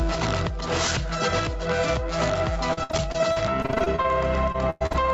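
Gain pumping runs through the whole clip. The gain swings by roughly 5 dB, so loud and soft passages sit closer together and the sound feels squashed. The likely cause is input gain set too high for the microphone, with a fast limiter or compressor clamping down on every peak and then releasing.

Repeated packet loss with a robotic sound first appears between 2.73 and 4.06 s. Audio data goes missing again and again, and each hole is filled by extending the last stretch of sound before the next hole arrives. The gaps are short, the longest about 58 ms, but about a quarter of that span is concealment. The result is choppy sound with small pieces missing.

A second burst of repeated packet loss runs from 4.52 to 4.96 s and is heavier. Fewer gaps occur, but they are longer, the worst about 103 ms, and roughly 40 percent of the stretch is patched rather than real audio. The call audio here is band-limited, with nothing above 8 kHz.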